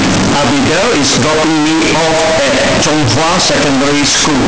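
From start to finish the speech is extremely loud and harsh, pinned at an almost fixed, high level in a buzzy, almost square waveform, with background noise as loud as the talker, though the pitch can still be followed. This is float read as integer, likely from 32-bit float samples being interpreted as 32-bit integers. The sign and exponent bits then dominate each value, so the original level and the quiet passages no longer matter.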